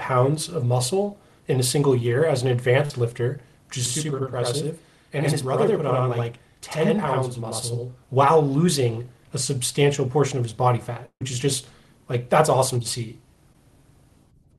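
At 1.99 s, and again from 2.85 to 2.91 s, there is short concealed packet loss. Audio arrived too late for the decoder. The receiver extended the previous sound to fill about 9 ms, then 43 ms. Each gap is a brief smear or wobble.

From 3.86 to 8.03 s there is a channel delay, heard as doubling. One channel runs about 85 ms behind the other, which fits a 4096-sample buffer. Both are summed to mono. The late copy sounds like an equal-level slap echo.

From 11.06 to 11.22 s comes a burst of packet loss. About 150 ms is missing. The receiver holds the last sound and fades it. It ends in about 70 ms of silence. The audio then jumps ahead.

At 13.53 to 13.55 s another short concealed packet loss leaves a smear.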